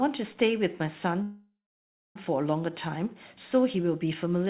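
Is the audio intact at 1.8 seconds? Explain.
No. At 1.8 seconds the audio sits inside a call audio freeze running from 1.22 to 2.17 s. Packets were likely delayed in transit, draining the jitter buffer, so the receiver extended the last sound as a fading buzz or hiss that drops to silence for about 0.63 s of the 0.93 s stall. When packets resume, the sound continues where it stopped: nothing is lost, but everything after is pushed about 0.93 s later.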